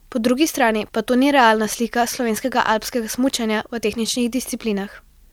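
No technical faults are audible anywhere in the speech recording.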